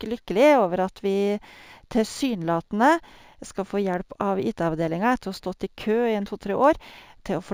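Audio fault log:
Throughout: imaging from linear upsampling. The speech sounds like it was raised from a 16 kHz rate to 48 kHz by joining samples with straight lines. That interpolation filters poorly. The top of the original band loses some brightness. A faint mirrored copy of the spectrum sits between 8 kHz and 16 kHz, roughly 35 dB below the signal. It adds a light metallic shimmer to sibilants and other bright consonants.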